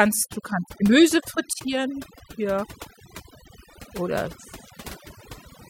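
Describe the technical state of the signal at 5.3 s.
At 5.3 s the background is pulled down and broken up into small twinkling specks. This is overdone noise removal, present across the entire clip rather than just at this moment. A noise reduction stage set too aggressively is cutting individual frequency bands deeply whenever they sit close to its noise estimate, so the quieter parts of the voice are being removed along with the noise.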